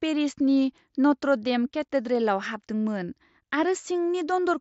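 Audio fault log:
No faults are heard in this speech clip. It comes through a Bluetooth mSBC headset codec, which caps the band at 8 kHz and leaves only a light grain on the louder sounds.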